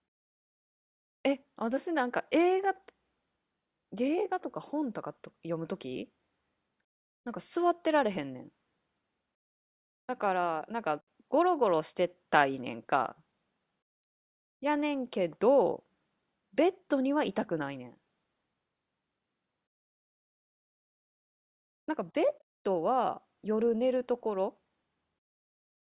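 Speech recording, no technical faults detected.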